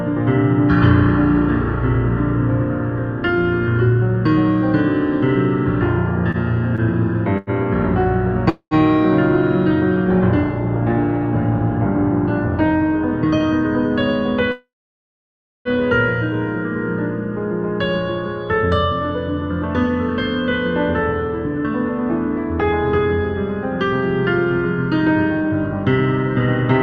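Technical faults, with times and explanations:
6.31–7.50 s, repeated stalls (stutter): the audio hesitates three times within this stretch, with roughly 136 ms of invented sound in all and the longest hold about 92 ms, about 11% of the span. Packets were arriving later or more slowly than playback consumed them, so the jitter buffer kept running dry. Each time the receiver stretched the last sound until data returned. Nothing is lost, but the flow drags and stutters.
8.49–8.74 s and 14.52–15.68 s, call audio freeze: the audio halts and then resumes exactly where it stopped, likely because packets were held up in transit and the jitter buffer emptied. The receiver filled the wait by continuing the last sound as a fading buzz or hiss, then silence. The first freeze fills 216 ms, the last 80 ms of it silent. The second fills about 1.1 s, with roughly 980 ms of silence. Each freeze adds its full length of delay, and nothing is missing.
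18.55–26.73 s, jitter buffer speed-up: the audio runs about 1% fast at unchanged pitch, a slight hurry that is easy to miss. The buffer held more audio than its target, so the receiver trimmed many short pitch-period-sized pieces in succession to pull the delay back down. In total it removed about a tenth of a second across these eight seconds.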